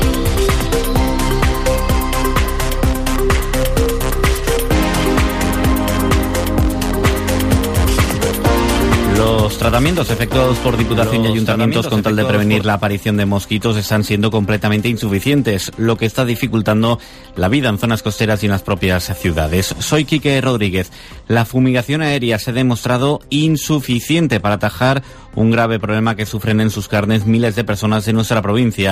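From 7.03 to 12.61 s, a doubled audio track: a dry, full-band copy trails about two seconds behind, somewhat quieter, likely from a second, slower capture path.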